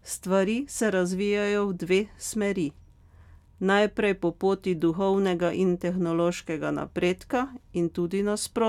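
Speech recording, with nothing technically wrong with it.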